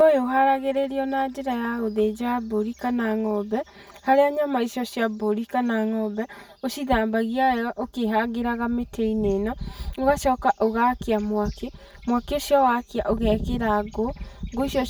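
Channel delay (comb filtering) runs throughout this speech clip. One channel arrives roughly 5 ms behind the other, and summing them to mono cancels shared content at regularly spaced frequencies, starting near 100 Hz and repeating about every 200 Hz. This leaves the voice hollow and phasey.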